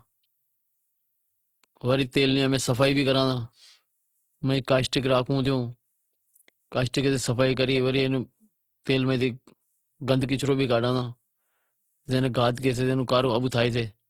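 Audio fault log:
Throughout, Opus compression: bits too scarce for fullband CELT coding, likely a low bitrate near 16 kbps, so bands get filled with noise, making the speech rough and grainy.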